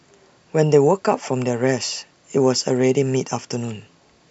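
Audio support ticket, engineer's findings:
No faults found in recording.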